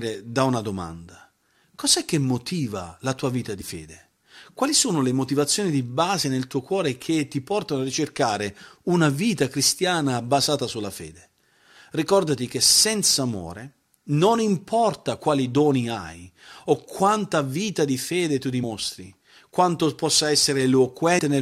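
Compressed frames skipped at 3.60 s after "motiva la tua vita", at 18.62 s after "vita di fede tu", and at 21.18 s. Whole frames are lost, consistent with frames of about 23 ms, so the speech jumps ahead by roughly 50, 70, and then 100 ms.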